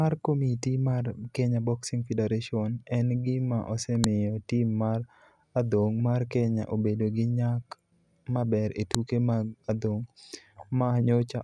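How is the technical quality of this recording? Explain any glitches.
The recording has two sharp clicks. At 4.04 s and 8.95 s, a file header was played as audio: header bytes at a joined segment's start were decoded as samples, giving a loud snap that shows as a thin tall spike on the waveform and a vertical broadband line on the spectrogram.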